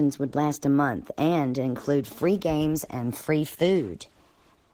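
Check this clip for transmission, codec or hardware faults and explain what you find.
There's one fault, and it runs the whole way through. Opus voice compression: a hybrid Opus encoder at a bitrate that sounds like about 16 kbps coarsely codes the speech, leaving it audibly hoarse and slightly robotic.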